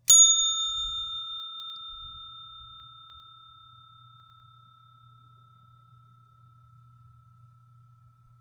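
At 1.4 to 1.7 s, 2.8 to 3.2 s and 4.2 to 4.4 s the audio has chunks out of order. In each case a 100 ms chunk was delivered late and plays after the material that should follow it: two chunks late in the first event, three in the second, one in the third. Nothing is missing, but each reordering leaves three hard joins, heard as a brief jumbled passage.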